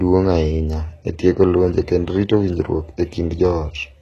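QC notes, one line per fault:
Throughout: HE-AAC compression, likely, with plainly audible damage. Content stops at 12.3 kHz, and the treble above the coded band sounds synthesised, with sibilants gritty and lispy where copied-up harmonics misalign with the lower spectrum. This fits a bitrate near 16 kbps.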